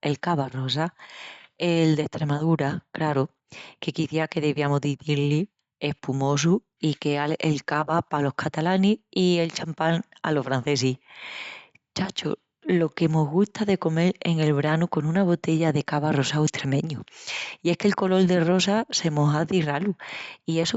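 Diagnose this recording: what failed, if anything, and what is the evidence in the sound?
Nothing failed; no fault is audible in this speech.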